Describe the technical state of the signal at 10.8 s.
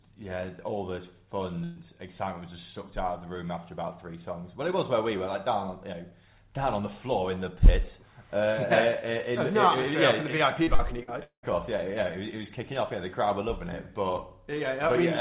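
At 10.8 s the signal is inside a burst of repeated packet loss (robotic sound) running from 10.64 to 11.46 s. Four gaps fall in that stretch, the longest 193 ms, and about 310 ms in total is patched by stretching out the last received sound, roughly 38% of the span. That patching produces the choppy texture. A single dropout would leave one hole or one smeared stretch, but here the holes recur in quick succession. The band stops at 4 kHz throughout, which fits a G.711 call path.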